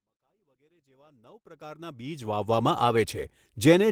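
The clip is speech with a smooth fade-in reaching full level at about 2.53 s, and nothing is technically wrong with it.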